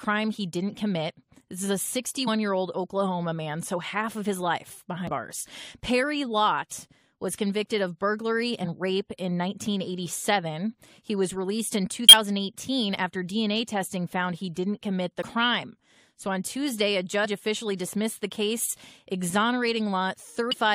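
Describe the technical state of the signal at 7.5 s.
At 7.5 s the speech signal is intact, with no technical fault present at that moment.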